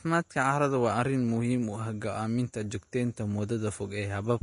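A short speech recording carries Vorbis compression damage from start to finish. Nothing reaches above about 10.6 kHz, so the top octave is gone and the sound feels dull. The treble that remains is grainy and hissy, because fine detail has turned into noise of similar energy. Tones sound roughened and consonant attacks are smeared. The damage is plainly audible. It is likely a low-quality Vorbis encode, which fits a rate near 35 kbps.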